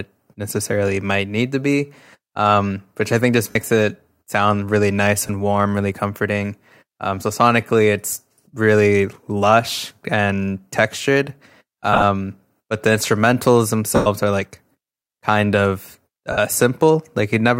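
Lost LE Audio frames cause brief noisy smears at 3.51, 5.27, 11.93–12.03 (scattered short gaps), 13.95 (about 105 ms, fading) and 16.32 s. The decoder refills each gap with the last spectrum and randomised signs, so harmonics dissolve into blurred broadband patches on a spectrogram, with dipping envelopes in the waveform.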